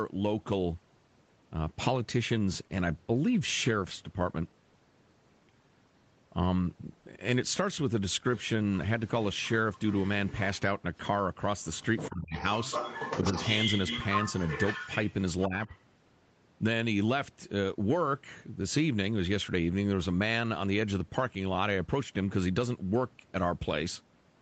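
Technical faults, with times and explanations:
9.07 to 10.6 s and 11.77 to 15.79 s, other side's voice leaking through: a second voice sits under the talker, faint in the first stretch and nearly as loud in the second. It's likely loudspeaker playback the echo canceller didn't fully remove from the mic.
12.09 to 12.35 s and 15.48 to 15.68 s, speech suppressed in double talk: the talker's voice suddenly dips while that leaked voice is present, by around 25 dB in the first spot and about 15 in the second. Likely the canceller couldn't separate the two and pulled both down.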